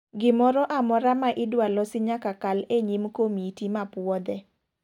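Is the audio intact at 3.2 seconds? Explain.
Yes, the audio at 3.2 seconds is intact, with no audible fault at that moment.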